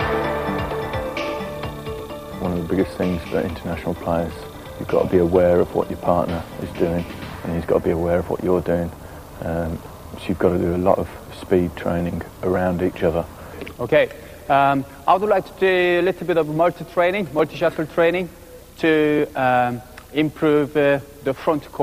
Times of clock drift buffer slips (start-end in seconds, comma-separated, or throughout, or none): 1.23-20.98